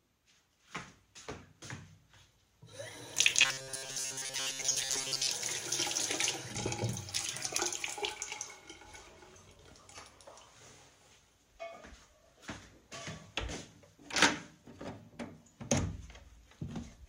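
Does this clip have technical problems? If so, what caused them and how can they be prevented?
Yes. From 3.42 to 5.27 s the sound turns robotic, a rigid metallic buzz near 133 Hz. The likely cause is repeated short buffers of about 7.5 ms filling most of that stretch while real audio arrives too seldom. Larger buffers and steady delivery prevent it.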